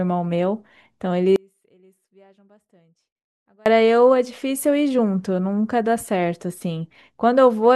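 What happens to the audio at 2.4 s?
At 2.4 s the speech sits inside an audio dropout to a faint residue, from 1.36 to 3.66 s, likely a signal loss with the path still live. Only a faint leak remains, roughly 35 dB down. The waveform and spectrogram show an abrupt, near-empty band.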